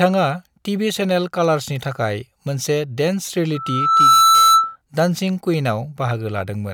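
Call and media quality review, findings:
Loudspeaker feedback squeal, 3.54–4.76 s. Pure tone at 1.3 kHz swells over roughly 0.7 s to about 10 dB above the speech, then stops. Probable component: mic picking up its own loudspeaker, loop gain above unity at 1.3 kHz. Spectrogram: single bright horizontal line thickening as it rises. Waveform: growing sinusoidal envelope overriding the speech.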